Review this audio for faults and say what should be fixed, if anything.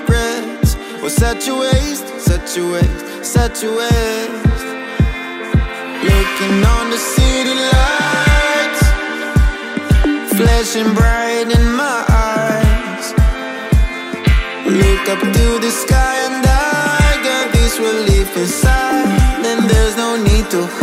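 Nothing here needs fixing; no faults are audible anywhere in the recording.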